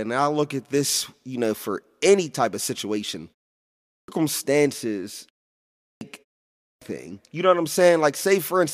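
The output device drops into a low-power state during short pauses in this speech clip and needs a few hundred milliseconds to wake and relock, producing clipped starts after a pause. After gaps of 0.46, 0.49 and 0.34 s, speech resumes with its onset swallowed: about 0.36 s lost at 3.72 to 4.08 s, just after "any type of situation", 0.30 s at 5.71 to 6.01 s, and 0.32 s at 6.50 to 6.82 s, so words burst abruptly out of silence.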